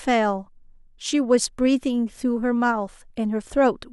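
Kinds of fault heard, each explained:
Nothing stood out on listening to the speech in this recording.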